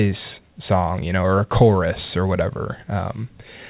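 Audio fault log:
Nothing stood out on listening to this speech, which comes over a call path with nothing above 4 kHz, consistent with a narrowband telephone codec.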